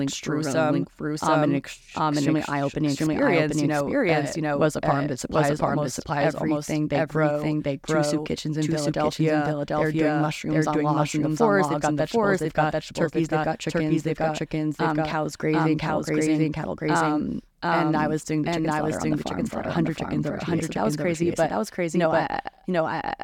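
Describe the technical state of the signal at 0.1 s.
A doubled audio track runs throughout the speech, including at 0.1 s. A second full-band copy trails the original by roughly 0.7 s at about equal loudness, with no decay or room colour, likely from the audio being captured twice through a slower second path.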